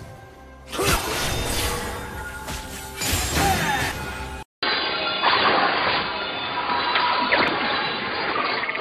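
From 4.43 s the sound drops out for about 200 ms, then returns dull and band-limited with nothing above 4.8 kHz, shifted in level by about 5 dB over a faint new noise floor, most likely because the input switched to a poorer device. At 7.48 s a brief blip cuts through, as damaged data in the compressed stream makes the decoder lose sync and resume at the next readable frame.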